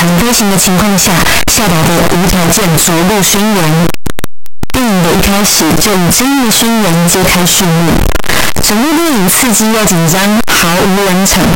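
From start to finish, the speech is buried in loud, harsh distortion. Quiet stretches blare as loudly as the rest. The likely cause is signed and unsigned mixed up in the 8-bit samples. Flipping the top bit turns every zero crossing into a full-range jump.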